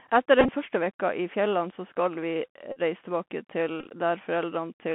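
Throughout, the speech sounds boxed-in and scratchy, with a granular hiss and rough s sounds: the Bluetooth CVSD headset codec's one-bit, 64 kHz stepping confines the band to about 150 Hz to 3.4 kHz.

At 0.39–0.51 s, 2.72–2.80 s and 3.80–3.87 s, short buzzes near 267 Hz break in. Each is a Bluetooth headset packet repeated: lost packets were replaced by re-decoding the previous one every 3.75 ms. In the first and third bursts, the longest runs last about 20 ms.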